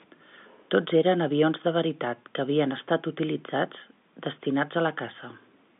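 Nothing goes wrong anywhere in this bit of speech, which just sits in the usual narrow telephone band with nothing reaching past about 3.8 kHz.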